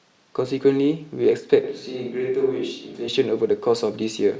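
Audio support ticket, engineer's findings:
Sudden roomy, hollow shift in the speech from 1.64 to 3.08 s, then snaps back. Bass thins, level falls about 5 dB, and room noise comes up to roughly 35 dB under the speech. Looks like a switch to a distant microphone, likely the close mic's signal dropping or getting left out for that stretch, so the far pickup carries it.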